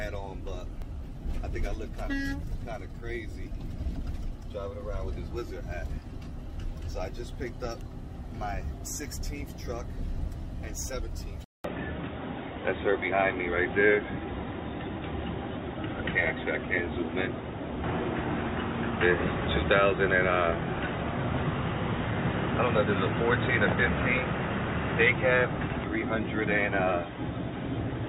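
At 11.44 s there's a 200 ms gap, then everything above 3.8 kHz is gone, with new noise and a level shift: likely the input switched to a poorer device.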